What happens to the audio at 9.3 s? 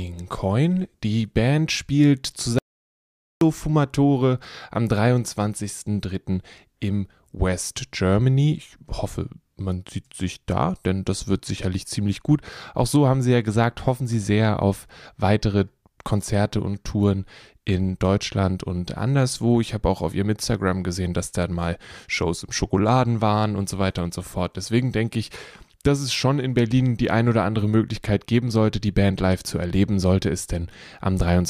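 Nothing goes wrong at 9.3 s: the speech carries on intact through that moment, with no dropout, glitch or other fault to be heard.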